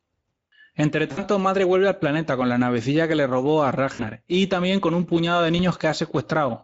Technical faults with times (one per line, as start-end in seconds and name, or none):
0.00-6.64 Speex codec
1.11-1.26 VoIP packet loss concealed by the speech codec
3.93-4.09 VoIP packet loss concealed by the speech codec
5.57-5.60 VoIP packet loss concealed by the speech codec